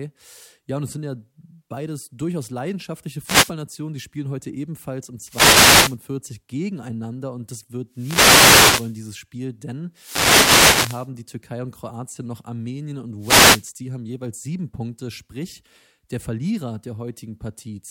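Wireless microphone noise hits occur at 3.24 to 3.53 s, 5.26 to 5.98 s, 7.91 to 8.99 s, 9.94 to 11.10 s and 13.19 to 13.67 s. Each is a short swish of static over the voice, lasting from about 0.3 s to just over 1 s. The analogue FM radio link fades as reflected signals cancel the direct one, so receiver noise rises.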